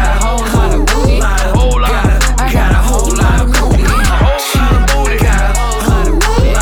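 At 4.60 s there is a repeated buffer. A tiny piece, about 1.45 ms, plays twice more, which fits a 64-sample buffer. It sounds like a brief click.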